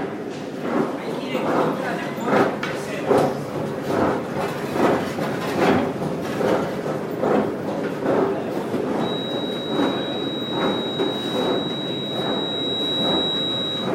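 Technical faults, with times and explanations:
8.96–13.94 s, feedback whistle: a steady 3.8 kHz tone rings behind the everyday sounds, roughly 5 dB below them, swelling and fading slowly, likely from a loudspeaker-to-microphone loop sitting just short of howling. On a spectrogram it appears as a thin horizontal line at 3.8 kHz whose brightness waxes and wanes.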